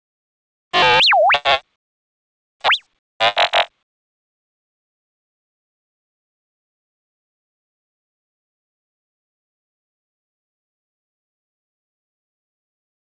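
Comfort noise replaces the background at 0.00–0.71 s, 1.76–2.60 s, 2.99–3.20 s and from 3.83 s to the end. In each gap the real ambience gives way to a steady, featureless hiss about 20 dB quieter, likely generated by the receiver while the sender paused transmission.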